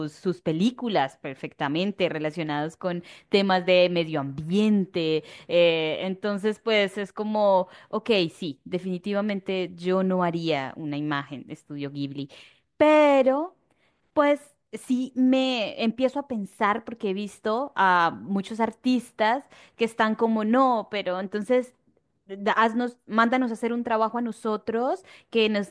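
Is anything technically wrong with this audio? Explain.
No, nothing is technically wrong with this audio.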